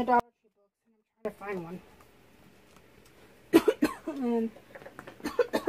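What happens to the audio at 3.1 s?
Nothing goes wrong at 3.1 s; the audio plays through that moment intact, with no dropout, click or distortion.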